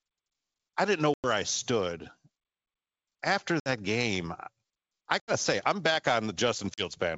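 Hard-edged holes of silence cut into the speech at 1.14, 3.60, 5.20 and 6.74 s, lasting about 100, 60, 80 and 40 ms. After each gap the voice returns slightly distorted, then settles. This is packet loss on an ADPCM call: a few packets went missing each time, and the decoder's adaptive predictor and step size drifted from the sender's until they realigned. The G.722 wideband coding stays clear around the gaps.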